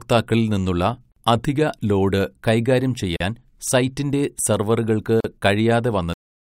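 At 1.12, 3.16 and 5.20 s, the speech drops out briefly. Each is a gap at a join of encoded pieces, about 47, 40 and 40 ms long, recurring every 2 s. The first comes just before "അധിക ലോഡ് കൈകാര്യം". The last follows "സൈറ്റിന്റെ സെർവറുകൾക്ക്". Separately encoded segments were joined untrimmed. Encoder delay and end padding remain as short silences. Their edges are smeared by the codec, so the silent part is shorter. The speech resumes where it stopped.

At 6.13 s, the audio has a cut-off end. The speech stops mid-sound and falls straight to digital silence with no decay. The final buffers were never written or played out.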